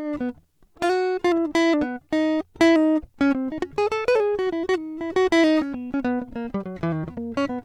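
Listening to the music from beginning to end, nothing stood out as a technical problem at any point.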